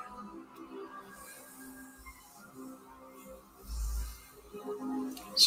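From 2.76 to 3.6 s there's sound cut by the noise suppressor: it mistook part of the audio for noise and pulled it down, by about 6 dB at worst, across most of that stretch. You hear the sound sag before recovering.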